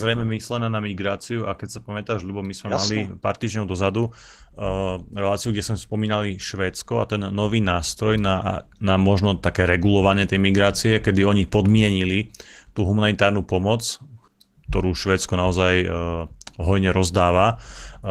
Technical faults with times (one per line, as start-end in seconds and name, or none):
0.00-18.10 Opus voice compression